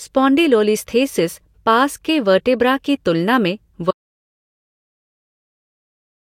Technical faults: audio dropout to silence

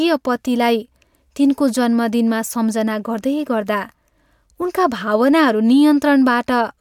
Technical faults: none

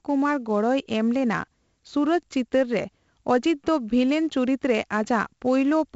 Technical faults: 4-bit ADPCM compression

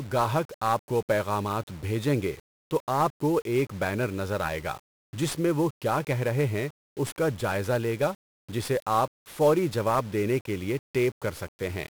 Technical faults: 1-bit DFPWM compression

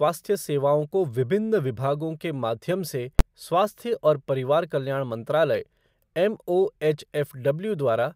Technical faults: invalid numbers at full scale

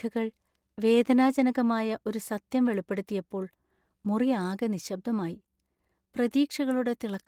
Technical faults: none

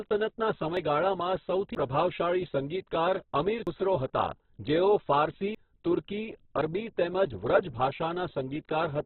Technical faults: Opus compression; dropped buffer (overrun)

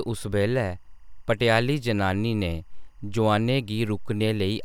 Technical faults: timecode bleed

